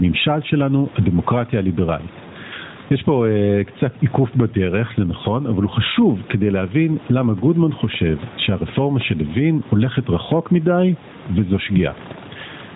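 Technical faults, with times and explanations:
Throughout, gain pumping: the level ducks by around 10 dB on each loud sound and recovers after it, squashing loud and soft parts closer together. The likely cause is microphone gain set far too high, with a fast limiter or compressor pulling it down.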